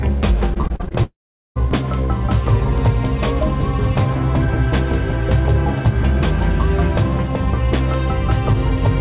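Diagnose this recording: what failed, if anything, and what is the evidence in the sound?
Network stage, repeated packet loss (robotic sound): from 0.54 to 0.95 s there are nine quick gaps, longest 40 ms, patched with repeated sound, leaving it choppy and robotic.

At 1.04 s the sound smears into a fading buzz, then about 0.4 s of silence until 1.58 s; likely a long network dropout, with that stretch gone.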